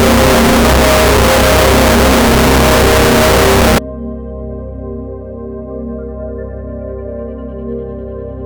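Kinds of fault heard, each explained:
Signed and unsigned mixed up: from the start to about 3.78 s the music turns into a very loud, harsh roar in which quiet moments are as loud as everything else. The likely cause is samples, which fits 16-bit samples, being read with the top bit flipped, so every zero crossing jumps across the full range. The waveform sits as a dense, loud block, and the spectrogram shows bright broadband energy filling every frequency.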